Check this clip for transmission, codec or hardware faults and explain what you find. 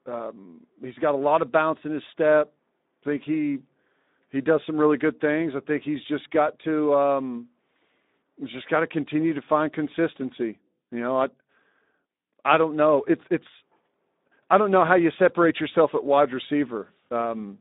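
One fault runs throughout: Speex codec compression. A low-rate CELP coder, consistent with about 11 kbps, leaves the excitation short of bits, so speech sounds hoarse and noisy. It is confined to roughly 200 Hz to 3.7 kHz, with nothing above 3.8 kHz.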